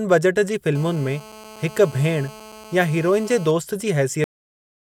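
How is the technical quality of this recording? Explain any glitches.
Two glitches affect this speech recording.

From 0.75 s to 3.51 s a hard, raspy buzz sits under the speech, about 20 dB below it, with a fundamental near 217 Hz and a dense stack of harmonics. It holds nearly steady. This is GSM phone buzz: a nearby 2G handset on a call transmits in short radio bursts 217 times per second, and the audio circuitry rectifies those pulses into an audible tone that has nothing to do with the sound being recorded.

At 4.24 s the audio stops dead mid-sound and falls straight to digital silence, with no natural decay, until the end. This is a cut-off end: the final buffers of audio were never written out, so the recording simply ends where the data runs out instead of where the sound finished.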